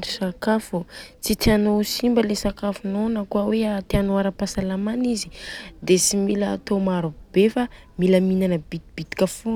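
No technical faults are audible in the recording.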